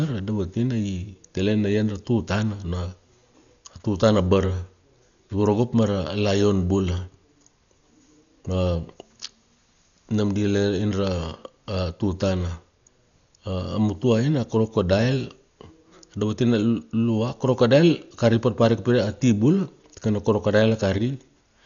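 Throughout the speech, the band stops dead at about 6.9 kHz and the tone turns dull, with rough, fluttering noise around voiced sounds, heavy damage that fits around 48 kbps and points to likely Dolby Digital compression. Unlike a plain low-pass, missing detail returns as noisy fill.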